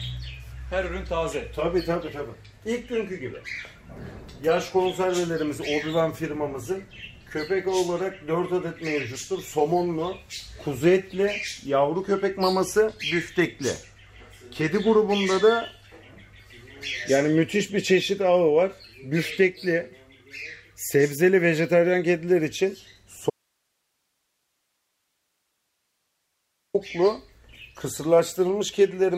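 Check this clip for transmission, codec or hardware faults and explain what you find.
One fault is present. An audio dropout to a faint residue runs from 23.3 s to 26.74 s, about 3.4 s. The wanted signal cuts off abruptly, likely from a break upstream while the path after it stayed live, so the gap is not silent. It holds only a low hiss, roughly 50 dB below the normal level. The sound then returns just as suddenly, with none of the gradual shape of a pause or fade.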